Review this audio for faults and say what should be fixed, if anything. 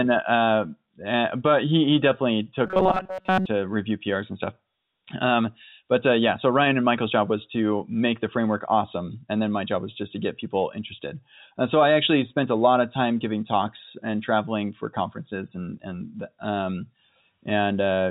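From 2.67 to 3.47 s the speech collapses into a rigid, metallic buzz near 188 Hz, the robotic sound from repeated short buffers. Audio likely arrived too late, so a roughly 5.3 ms chunk was looped across most of that stretch while the real sound was skipped. Beneath it, the G.711 telephone coding limits everything to below 4 kHz. A larger jitter buffer, or a fix to the path delivering audio late, would prevent the looping.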